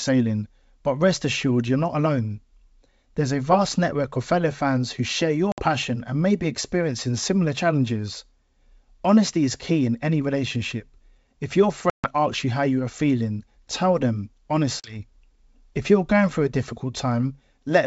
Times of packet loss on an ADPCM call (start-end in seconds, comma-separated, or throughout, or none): 5.52-5.61, 11.90-12.13, 14.80-14.98